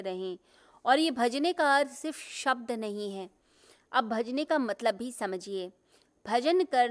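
Listening to the speech recording, nothing stood out as a technical problem at any point.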